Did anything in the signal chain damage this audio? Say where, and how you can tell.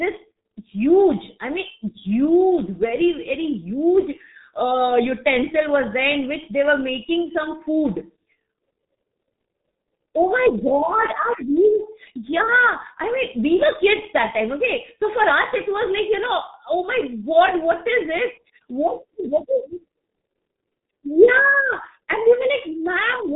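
Yes, at the codec stage: the speech has passed through the G.723.1 codec for its whole length, and the damage is heavy. This low-rate telephony coder models the voice in 30 ms frames and refreshes that model slowly, which fits a rate of about 6.3 kbit/s. You can hear it because nothing survives above 3.8 kHz, so the speech is dull and muffled, and because the coarse frame-by-frame modelling makes it hoarse and smears the consonants together.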